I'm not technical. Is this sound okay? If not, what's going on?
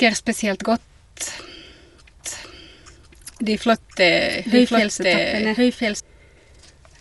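No. Throughout the clip the speech sounds dull and muffled, with a rough, fluttery edge, and nothing above about 11.6 kHz. That is likely Dolby Digital compression squeezed too hard: the encoder drops the top of the sound and fills gaps with noise.

From 2.24 s to 6.0 s a second, quieter copy of the speech plays about a second behind, starting and stopping abruptly. This is a doubled audio track, likely the same recording mixed in twice, out of step.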